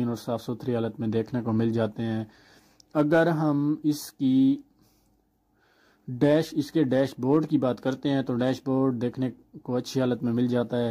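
No dropouts, distortion, timing errors or level problems turn up anywhere in the audio.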